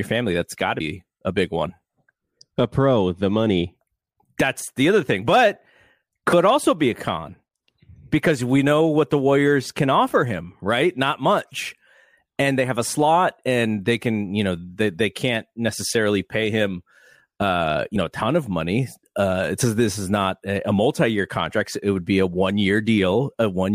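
Compressed frames skipped at 0.79 s between "got to" and "a big one", at 6.32 s before "also be a con", and at 17.95 s between "necessarily pay him uh" and "know a ton of". Roughly 70, 50 and 20 ms of speech vanish, jumps consistent with whole frames of about 23 ms. Each join is an abrupt jump ahead in the speech.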